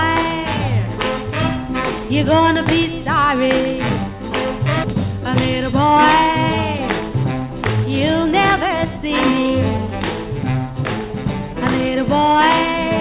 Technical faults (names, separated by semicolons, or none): skip ahead; jitter buffer speed-up